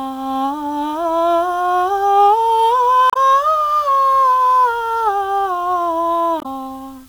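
The music is quantised to 8 bits with dither added before rounding, so the rounding error becomes random rather than tied to the signal. Low bit depth with dither leaves a constant, even hiss about 35 dB below the music throughout, with no distortion.

At 3.10 to 3.17 s and again at 6.39 to 6.46 s, damaged data in a compressed stream makes the decoder misread frames, lose sync and hunt for the next header. Each 70 ms break is heard as a brief squawk or blip.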